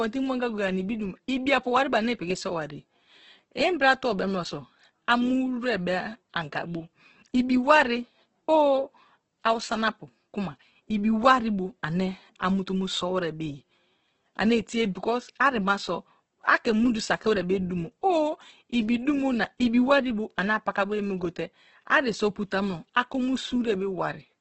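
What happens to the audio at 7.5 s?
At 7.5 s the speech carries the same damage heard across the whole clip, most likely from heavy Opus compression running its music-oriented CELT mode at a very low rate, which fits roughly 12 kbps. Starved of bits, the encoder keeps each band's energy but refills the detail with folded or noise-like content, so the speech sounds grainy and rough rather than swirly, and nothing reaches above about 8.2 kHz, leaving it dull.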